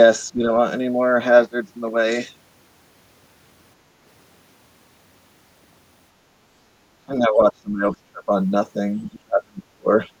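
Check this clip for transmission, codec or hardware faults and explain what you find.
The speech suffers from repeated dips that sound like speech suppressed in double talk, at 0.31 to 0.43 s, 6.9 to 8.29 s, 9.07 to 9.88 s and 10.06 to 10.1 s. The likely cause is an echo canceller that, with both ends talking at once, could not tell the near talker from loudspeaker echo and attenuated everything. The brief dips near the start and end drop by about 10 dB, while the two longer stretches sink far deeper, about 25 dB and about 35 dB, leaving the speech faint and broken for most of each span.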